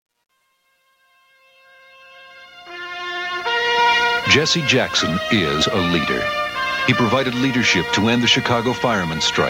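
A fade-in gain stage that keeps too few bits and applies no dither produces truncation distortion at the start of the audio, from 0.0 to 3.97 s. At the low end each level lands on only a few coarse steps, consistent with roughly 11-bit resolution. The waveform turns into blocky squares, so the quietest part, 0.0 to 2.44 s, sounds gritty.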